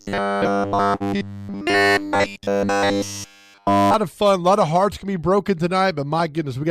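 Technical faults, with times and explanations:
0.01 to 3.94 s, robotic sound from repeated short buffers: The audio likely arrived too seldom, so playback kept looping a chunk of about 10 ms while the real signal was skipped. All of this stretch is repeats, which forces a fixed 100 Hz buzz into a rigid, metallic tone.
0.95 to 1.02 s, short stall from a late packet: A packet was not there when it was due, the jitter buffer ran dry, and the receiver stretched the last sound for 50 ms until it arrived. Nothing is lost, but a sound holds too long, leaving 50 ms of added delay.
1.04 to 1.08 s, short concealed packet loss: About 20 ms of audio never reached the decoder in time. The receiver bridged the gap by extending the preceding sound and blending back into the real signal, giving a brief smear or wobble where that 20 ms is missing.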